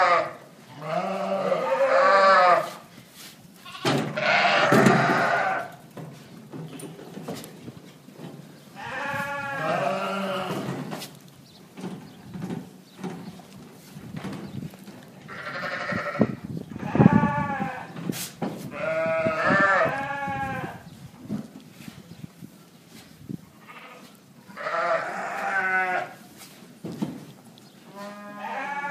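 No technical faults are audible anywhere in the recording.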